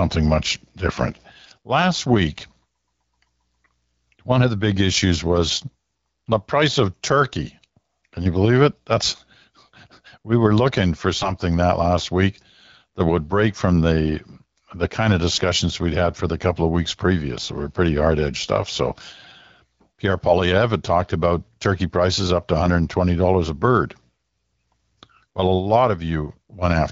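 AMR bit errors, with flipped, weakly protected frame bits misplacing excitation pulses and skewing pitch, gain and spectrum values, turn the speech briefly hoarse and gargly at 0.43–0.56 s, at 11.18–11.31 s between "we were looking for" and "that last week that", and at 22.65–22.68 s after "turkey prices up to", over light wideband codec colouring.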